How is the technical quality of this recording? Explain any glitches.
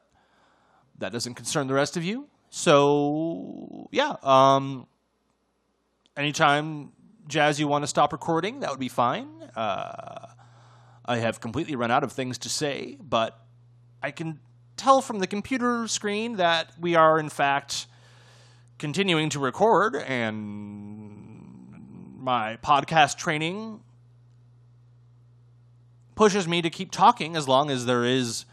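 The recording has one fault: mains hum. It begins at 7.55 s and runs to the end at 28.53 s. A steady low tone sits under the speech at 60 Hz, with some low harmonics above it. It stays roughly 30 dB below the speech, so it is quiet but constant. Mains hum comes from the power line leaking into the signal, through a ground loop or a nearby transformer.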